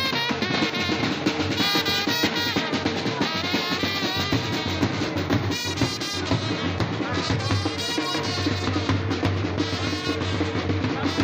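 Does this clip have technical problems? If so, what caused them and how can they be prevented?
Yes. From 2.33 to 7.56 s there's a train of clicks: about forty evenly spaced pulses, 6.7 a second, roughly as loud as the sound itself. That's likely interference from nearby gear or a faulty connection or power supply. Reroute cables away from noisy equipment and check the connections and power supply.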